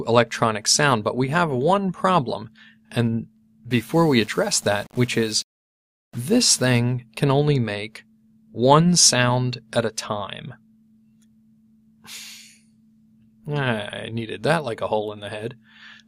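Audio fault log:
3.71 to 6.79 s, low bit depth without dither: for these three seconds the sound gets a grainy, gritty edge that shifts along with it. That's the giveaway. It sounds like the level was squeezed onto a very coarse grid, something like 7 bits, rounded off with no dither, so the error tracks the signal. The grit sits only about 30 dB down.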